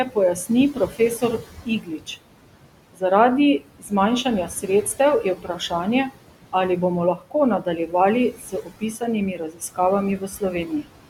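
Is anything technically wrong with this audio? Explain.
Yes. Throughout this speech clip, noise suppressor artifacts pull the room noise down by about 18 dB between words, so the background pumps. On a spectrogram it shows as flickering gaps in the noise floor.

Speech cut by the noise suppressor occurs at 0.05–2.09, 2.93–3.02, 3.59–3.92, 4.24–5.72, 7.16–7.94 (just after "ali bomo"), 8.34–9.02, 9.35–9.79 and 10.18–10.88 s. Each span loses about 100–700 ms of speech. The suppressor mistakes soft speech for noise and lowers it by about 12–18 dB, so consonants and endings sound swallowed. On a waveform these appear as sudden dips in the envelope, and on a spectrogram as faded patches of speech energy.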